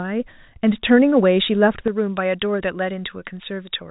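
From 1.88 s to the end, a J.17 pre-emphasis boost went uncorrected by its matching de-emphasis, so pre-emphasis was left on, lifting treble about 11 dB at 10 kHz relative to 1 kHz. Within the telephone band, which stops near 3.8 kHz, the speech turns thin, bright and sibilant.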